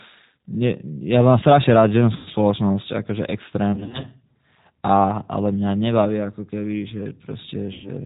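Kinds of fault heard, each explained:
G.729 codec: the whole clip is cut off above 4 kHz and sounds rough and a bit synthetic, typical of an 8 kbit/s model-based voice coder.
VoIP packet loss concealed by the speech codec: near 2.2 s, 3.7–4.1 s and 7.7 s, gaps get filled with a buzzy, fading smear of the preceding sound.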